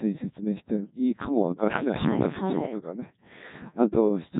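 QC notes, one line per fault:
Throughout: Codec 2 vocoder. The speech is robotic and buzzy, with nothing above 3.8 kHz. The decoder rebuilds it from sine waves, using only pitch, voicing, energy and a coarse spectral shape, so the original waveform is gone. The heavy damage fits a rate near 1.2 kbit/s.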